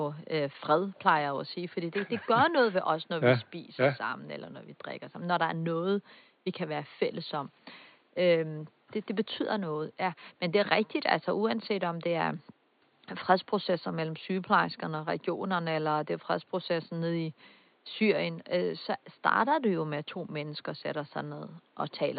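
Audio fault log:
Nothing stood out on listening to this speech, with only a faint room noise sitting about 39 dB below the voice.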